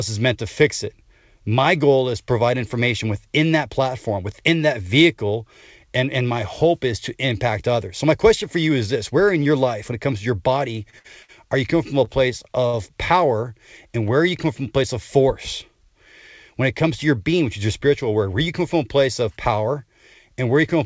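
Five short stalls from late packets come at 10.90, 10.99, 11.22, 12.05 and 12.66 s. Each time the jitter buffer ran dry, so the last sound was held for 18 to 67 ms before playback resumed with nothing lost. On a spectrogram each stall appears as a horizontally smeared, frozen stretch, and on the waveform as a held, repeating segment. All of this sits below the 8 kHz ceiling of the G.722 call path.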